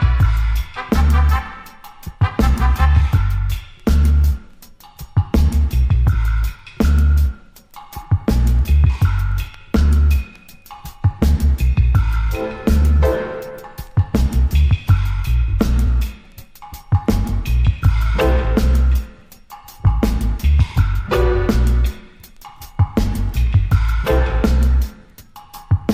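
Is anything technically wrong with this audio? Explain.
Yes. There are two repeated frames, at 15.86–15.88 s and again at 22.57–22.60 s. Each time, a 23.2 ms block of compressed audio gets decoded twice, which fits a single codec frame being written or sent one extra time. That produces a brief stutter and lengthens the clip by 23.2 ms per event. On the waveform, the same short shape appears twice back to back. On a spectrogram, an identical narrow column repeats, often with a thin vertical line where the copies join.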